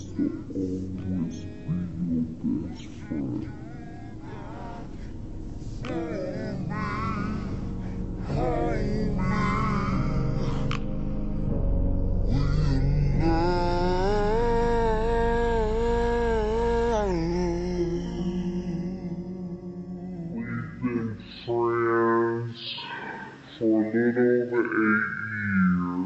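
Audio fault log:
Throughout: wrong sample rate. Everything runs at half speed and sits a full octave low, 12 semitones down. Tempo and pitch fall together by the same ratio, so nothing sounds stretched or processed. The sound is slow and deep. This fits audio captured at 48 kHz but played back at 24 kHz with no conversion. Each sample is held twice as long as intended, which halves every frequency.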